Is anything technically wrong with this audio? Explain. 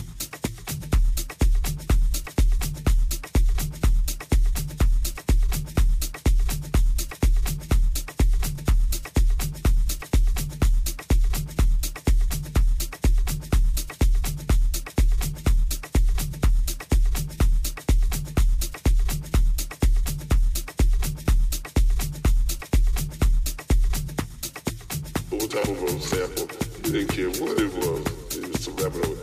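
Yes. From 0.12 s to 29.21 s, nearly the whole clip, there are clock slip clicks. A tiny discontinuity recurs roughly every 40 ms, hundreds of them in all, each the size of a single sample. The likely cause is two devices running on unsynchronised clocks that differ by around 700 ppm, so the accumulated drift forces one sample to be dropped or repeated at a steady rate. At this spacing the ticks merge into a faint, regular rattle across the audio.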